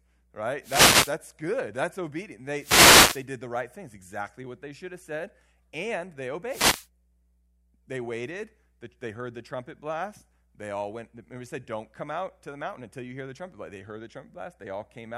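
Wireless microphone noise hits strike at 0.62–1.15 s, 2.56–3.26 s before "the right things exactly", and 6.47–6.88 s after "have said and they". The radio signal fades, so receiver static swishes over the speech.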